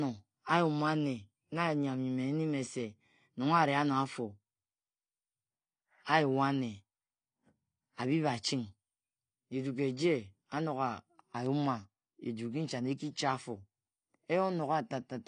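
From start to end the speech shows AAC compression damage, plainly audible throughout. Nothing remains above about 9.8 kHz, so the top of the sound is dull, and sibilants and sustained vowels carry a warbling, fizzy texture where the spectrum has been coarsely quantised and left with gaps. The likely cause is an AAC-LC encoder running short of bits, and the depth of the damage fits a rate near 32 kbps.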